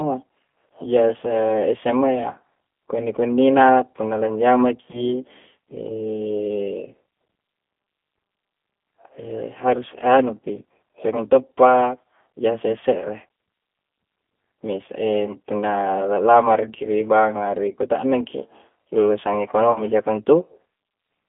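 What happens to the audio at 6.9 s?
At 6.9 s, as throughout the speech, G.729 codec coding is at work, and it is not a momentary event. The coder models each 10 ms frame as a vocal tract filter fed by a pitch predictor and a handful of pulses, which fits an 8 kbit/s G.729A link. Everything is confined to a telephone band of roughly 200 Hz to 3.5 kHz, and the rebuilt speech sounds plainly rough and synthetic.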